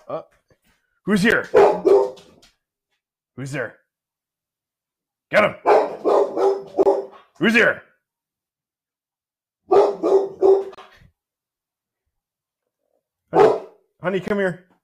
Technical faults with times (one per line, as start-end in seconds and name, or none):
1.31 gap at a join of encoded pieces
6.83-6.86 gap at a join of encoded pieces
10.75-10.78 gap at a join of encoded pieces
14.28-14.30 gap at a join of encoded pieces